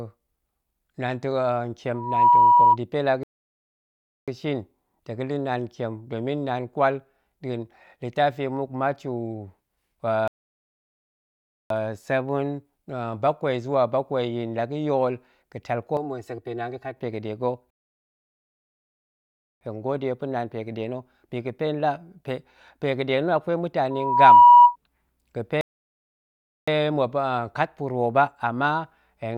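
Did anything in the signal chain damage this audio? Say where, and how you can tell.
Yes. Loudspeaker feedback squeal at 1.94–2.77 s and 23.90–24.76 s comes from the acoustic path between loudspeaker and microphone. A single 969 Hz tone swells over a few tenths of a second to about 10 and then about 15 dB above the speech. Unlike a test tone or hum, it builds itself up from the loop.

Rebuffering stalls at 3.23, 10.28, 17.70 and 25.61 s belong to network delivery and playback. The audio drops to silence for 1.04, 1.43, 1.91 and 1.06 s, then resumes exactly where it stopped. Unlike a dropout, nothing is skipped; only time is added.

Channel delay (comb filtering) at 15.97–16.97 s arises in the buffer or mixing stage. One channel runs about 3 ms late and is summed to mono, cutting evenly spaced notches from around 200 Hz upward. The sound turns hollow and phasey rather than muffled like a low-pass fault.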